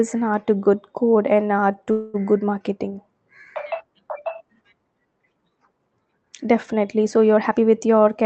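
At 1.91 s, just after "good code and art", a call audio freeze sets in, likely from delayed packets draining the jitter buffer. Until 2.26 s the last sound drags on as a fading buzz, seen as smeared horizontal bands. The speech then resumes intact, about 225 ms late.

From 7.37 s to 8.24 s a jitter buffer speed-up trims short pitch-period pieces, roughly 150 ms in total, to shed surplus delay. The speech runs about 18% fast at the same pitch. Syllables crowd together in the waveform, while the spectrogram's harmonics stay level beneath the Opus path's 8 kHz ceiling.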